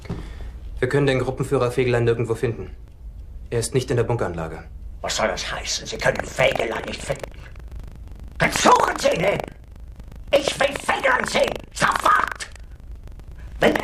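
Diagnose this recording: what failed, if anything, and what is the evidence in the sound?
Buffer tearing, at the driver or buffer stage. A robotic 25 Hz buzz runs from 5.88 s to the end, which fits a 40 ms buffer period. Writer and reader have slipped. About a tenth of each period replays audio roughly 100 ms old, with hard joins.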